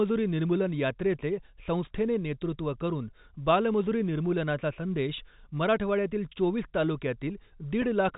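Speech, with one brief packet loss with pitch repetition at 7.82 s, where about 10 ms of audio went missing, which fits a single lost packet. The receiver bridged the hole by repeating the last pitch period, so instead of a click or dropout the sound is momentarily held, giving a faint buzzy sustain before normal audio resumes. The line runs over G.711 telephone coding, heard as band-limited audio with nothing above 4 kHz.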